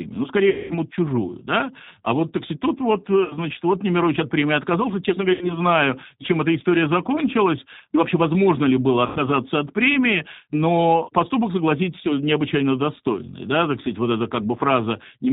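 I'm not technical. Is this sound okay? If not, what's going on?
No. Two things are going on.

The whole recording passes through the G.729 codec, a compression scheme used for internet phone calls. It rebuilds the voice from a rough model of how a throat shapes sound rather than storing the sound itself. Everything above 4 kHz is missing, so the voice sounds thin and muffled like an old phone line, and also slightly rough and artificial. That artificial roughness is what sets it apart from a simply narrow or muffled recording.

There are also four short breaks where VoIP packet loss was concealed by the speech codec: 0.50 to 0.74 s (about 200 ms of sound lost), 3.24 to 3.37 s (60 ms), 5.33 to 5.60 s (80 ms), and 9.06 to 9.20 s (100 ms). Parts of the call never arrived, so the decoder guessed by stretching out the last bit of voice into a buzzy tone or a coloured noise that fades instead of going silent. 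Unlike a plain dropout, the voice stays weak or distorted for a moment after each gap before recovering.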